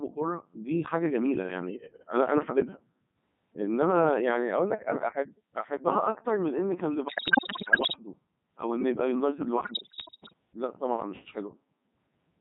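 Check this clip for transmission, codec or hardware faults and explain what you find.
Two faults are present: a very low-rate speech vocoder throughout, and two bursts of radio bit errors.

The whole clip has passed through the Codec 2 vocoder. The sound suggests its top 3.2 kbit/s mode, and the damage is heavy. Only pitch, voicing, energy and a coarse spectral envelope get through. The decoder rebuilds the speech from sine waves, and the original waveform is lost. The result is robotic and buzzy.

Bit errors on digital voice radio break in twice, from 7.08 to 7.96 s and from 9.64 to 10.33 s. Each bit in this codec controls the pitch, level, voicing or spectrum of a whole frame. Corrupted bits therefore throw entire frames off. The first burst is worse, roughly one bit in five flipped. The second is about one in ten. The speech jumps in pitch and loudness, changes colour abruptly, and dissolves into bleeps and warbling gibberish.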